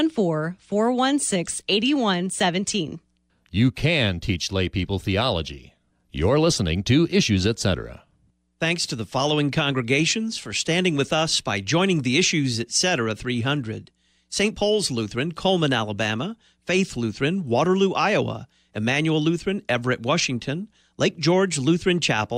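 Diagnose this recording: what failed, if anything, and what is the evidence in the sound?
Nothing failed: the speech recording shows no audible fault at any stage of the chain, from wiring and conversion through to playback.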